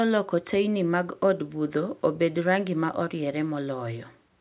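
Nothing technically wrong can be heard in this speech recording at any point.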